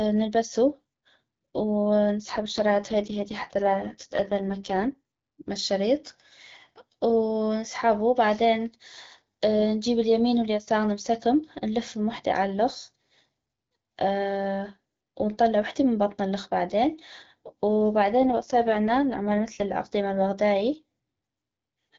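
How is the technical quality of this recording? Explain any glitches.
The recording has two AMR rate drops, at 2.20 to 4.93 s, ending just before "مال شريط", and at 18.18 to 19.67 s, ending before "العقدي مال". In each, speech over the wideband link turns rough and buzzy, consistent with the codec falling from about 12.65 to 6.6 kbit/s to protect bits on a weak connection. The spectrogram keeps its full band with no gap, but harmonics smear into noisier, blurred texture until the rate recovers.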